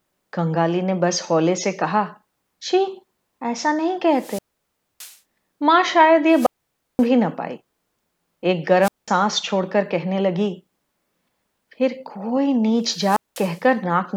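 A rise of hiss, then near silence, then speech returning, occurs at 4.14–5.17 s, 6.29–7.07 s, 8.81–9.08 s and 12.89–13.63 s. These are wireless microphone squelch dropouts: the FM signal faded and the receiver's squelch muted output for about 0.62, 0.53, 0.20 and 0.20 s.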